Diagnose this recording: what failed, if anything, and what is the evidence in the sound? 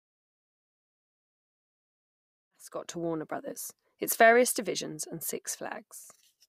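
Nothing failed in this recording.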